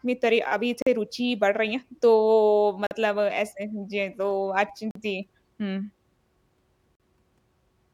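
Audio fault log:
0.82–0.87, 2.87–2.91, 4.91–4.95 and 6.95–7.00 s: gap between chunks. The speech drops out for 44 ms every 2 s, with hard edges, because silence sits between 2-second pieces of audio at each join. Nothing seems missing, it just stutters regularly.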